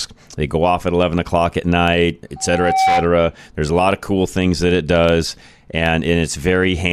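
Just after "eleven o'clock at night", at 2.36 s, a loudspeaker feedback squeal sets in and lasts until 3.10 s. The microphone is hearing its own loudspeaker, and at 765 Hz the loop gain passes one, so that tone feeds on itself, swelling over roughly half a second to sit a few decibels above the speech. A spectrogram shows a single bright horizontal line at 765 Hz thickening over time; the waveform shows a growing sinusoidal envelope.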